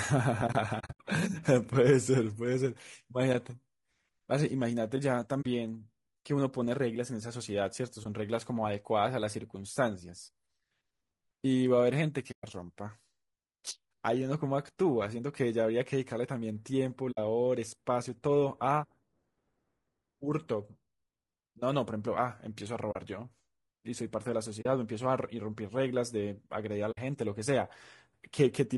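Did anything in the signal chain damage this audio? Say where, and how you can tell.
Yes. Throughout, the speech sounds rough and grainy, with noise filling the gaps between harmonics and a dull or synthetic-sounding top band. This is low-delay AAC compression, likely AAC-ELD at the codec stage, and it fits a bitrate around 32 kbps. Its short frames resolve pitch harmonics poorly.

Soft-edged dropouts fade out and back in at 0.79–1.00 s (broken holes scattered over 200 ms), 5.41, 8.03, 12.31, 17.11, 22.91, 24.61 and 26.91 s, each 20–160 ms long. This is AAC frame loss with muting. Frames went missing in transmission, the decoder zeroed their spectrum, and the overlapping windows smoothed the edges.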